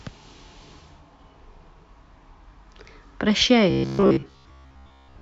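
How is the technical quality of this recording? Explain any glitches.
Robotic sound from repeated short buffers runs from 3.70 s to the end of the speech at 5.22 s. The likely cause is audio arriving too seldom, so the playback fills the gaps by looping the last fragment of about 15 ms while fresh audio is skipped, and most of the stretch is made of these repeats. That loop imposes a fixed buzz at about 66.7 Hz, turning the voice metallic while it still loosely tracks the speech.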